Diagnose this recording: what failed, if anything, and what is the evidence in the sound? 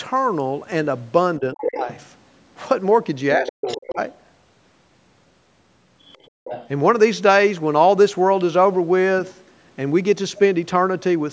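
Speech suppressed in double talk at 1.39–1.88 s and 3.37–3.99 s: the voice drops by roughly 20 and 30 dB, likely the call's echo canceller turning both talkers down.

Other side's voice leaking through at 1.57–1.63, 1.84–2.05, 3.46–3.78, 6.02–6.28 and 6.44–6.68 s, about 15 to 35 dB below speech. The likely cause is loudspeaker echo escaping cancellation.

Background gated by the echo canceller at 6.30–6.44 s: room sound falls about 30 dB while the loudspeaker plays, then returns. Call processing's band-limit, with nothing above 8 kHz, is expected.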